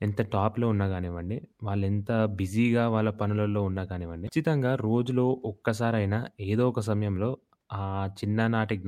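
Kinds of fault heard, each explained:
Damaged data in a compressed stream: corrupted bytes in the encoded speech stream made the decoder misread those frames and lose sync until it found the next valid frame header, producing a brief disturbance about 40 ms long, from 4.25 to 4.29 s.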